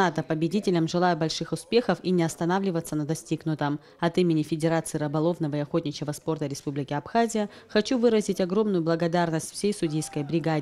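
No technical faults can be heard in this audio.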